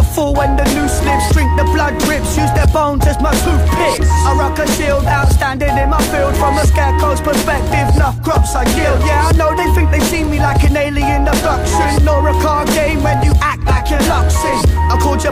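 No technical fault can be heard anywhere in the audio, and the signal stays steady and intact throughout.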